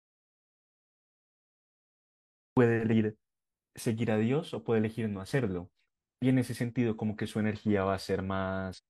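A speech recording that opens in dead silence: an audio dropout to silence is already under way when the clip begins and lasts until 2.57 s, with no room tone at all. On a waveform this is a flat line, and a spectrogram shows it as empty. That points to the input likely having been lost, through a disconnected device, failed link or stray mute, while the recorder kept writing silence. After that come three short bursts of damaged data in a compressed stream, at 2.88 to 2.93 s, at 5.81 s, and at 8.73 to 8.79 s. Each is heard as a chirp, squawk, click or short hole that breaks the flow of the speech. On a spectrogram these show as brief vertical smears or blocky patches of energy that do not follow the speech harmonics, and on the waveform as abrupt spikes or discontinuities. They arise where corrupted bytes make the decoder misread frames, lose sync and hunt for the next valid frame header.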